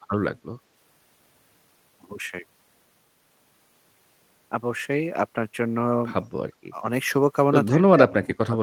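At 6.38–6.43 s and again from 7.70 s to the end, speech suppressed in double talk drops the level roughly 25 and 35 dB, likely an echo canceller muting overlapping talk.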